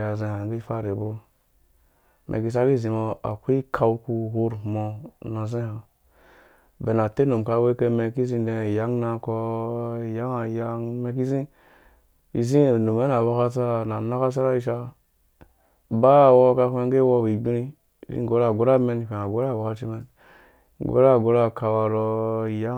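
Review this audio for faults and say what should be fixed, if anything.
Two sharp, isolated clicks occur at 3.31 s and 9.86 s, each a thin vertical line across the spectrum. The likely cause is dropped samples: a handful of samples are missing, so the waveform jumps abruptly. More buffer headroom in the capture chain would prevent these clicks.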